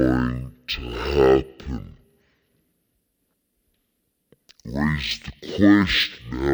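Stereo read as mono runs throughout the speech clip. Left and right samples are read in turn as one channel, giving half speed and pitch an octave low.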